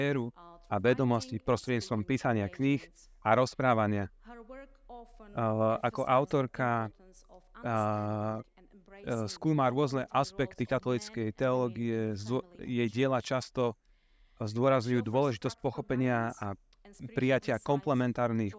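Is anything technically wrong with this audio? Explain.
No, nothing in this audio points to a technical problem with the signal.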